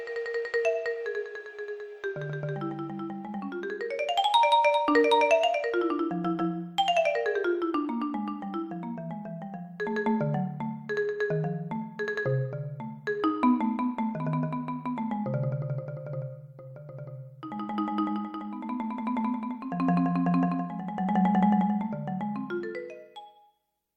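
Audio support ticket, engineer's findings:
Nothing to flag here, no audible faults anywhere in the recording, so no component to chase on this one.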